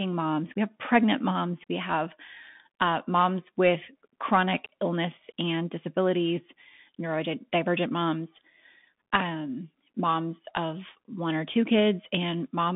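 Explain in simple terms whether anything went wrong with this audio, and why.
Bluetooth CVSD headset codec, throughout: the speech was coded as tiny up-or-down steps, and nothing above 3.8 kHz survives, so it sounds muffled and plainly gritty.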